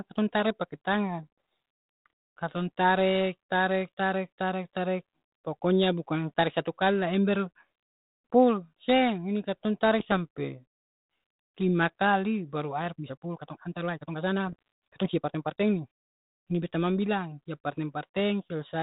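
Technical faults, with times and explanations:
10.0 to 10.13 s and 14.47 to 14.59 s: bit errors on an ADPCM link. Both show short pops and rough bursts with brief jumps in level. A flipped bit throws off the decoder's step size and prediction. The damage then rings on for milliseconds. The error rate is small, well under one percent.
12.91 to 15.87 s: time-stretched section. The pace suddenly runs about 1.49 times faster while pitch holds steady. The sound turns rushed. This is likely software squeezing the audio to fit a length, dropping short pieces to keep pitch.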